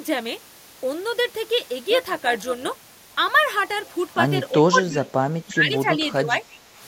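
From 1.90 to 2.91 s there is overlap-add ripple. The frames were rejoined with an overlap that doesn't sum to a steady gain. So the level pulses at around 150 Hz, by about 6 dB. It sounds like a metallic buzz with extra tones around each note.

From 4.69 to 5.11 s, the speech drops sharply, by around 20 dB at its deepest. From 5.45 to 6.45 s it sinks again, by around 10 dB. The likely cause is speech suppressed in double talk, with an echo canceller ducking the talker.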